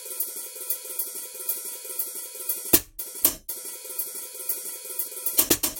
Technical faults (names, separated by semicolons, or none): damaged data in a compressed stream